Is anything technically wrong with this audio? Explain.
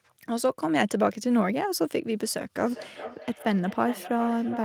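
Yes. From 2.56 s to the end of the clip there is feedback echo between two devices. Two devices on the same call share a room, and one plays back what the other's microphone sent. That microphone captures the playback again. Each device's echo canceller removes only its own output, so the loop goes unchecked. The speech returns as a delayed copy roughly every 400 ms, peaking at about 13 dB below the direct speech.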